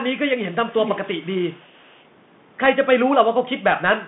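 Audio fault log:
Throughout: Bluetooth CVSD headset codec. Nothing passes above 3.8 kHz, and the one-bit adaptive step produces granular hiss, scratchy sibilants and distortion on loud high-frequency sounds.
0.51–2.03 s: echo leak. A copy of the speech returns about 470 ms late, roughly 15 dB down, likely from a far-end loudspeaker that an incomplete echo canceller let through.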